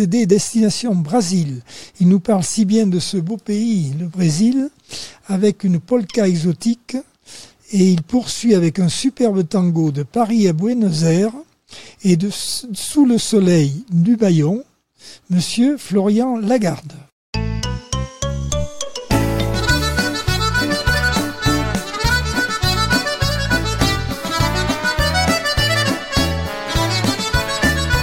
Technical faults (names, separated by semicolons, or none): none